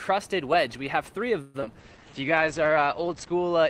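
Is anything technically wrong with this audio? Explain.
Yes. Four network-related faults cluster in the middle of the clip.

At 1.41 s a long network dropout begins, likely from a stall in packet arrival that also shifted the delay by roughly a tenth of a second. The receiver had nothing to decode for about 0.22 s, so it stretched the last sound into a fading synthetic buzz for around 200 ms. When real audio resumes at 1.64 s, a further 60 ms of content is simply gone, so the sound jumps ahead.

Right after, at 1.66 s, comes a short concealed packet loss: about 28 ms of audio missed the decoder. Only about 8 ms of guessed audio covers the gap before the real signal returns, and the remaining 20 ms of that slice is skipped outright. The result is a quick smear or wobble at 1.66 to 1.69 s rather than a clear gap, and any brief sound falling in that spot can drop out.

From 1.75 to 2.11 s a jitter buffer slow-down follows. 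Running low or having just raised its target delay, the buffer rebuilt its reserve by repeating single pitch periods and bits of pauses, adding 58 ms in total. Playback runs at about 86% speed while pitch stays put, so sounds in that stretch come out drawn-out.

At 1.81 s a call bitrate drop sets in and lasts to the end. The bandwidth estimate fell and the encoder went from 32 to 11 kbps, holding the lowest rate for about 1.5 s. Coding becomes coarse and the audio band shrinks from 20 kHz to 8 kHz, so the remainder sounds muffled, rough and watery, lacking its earlier top-end detail.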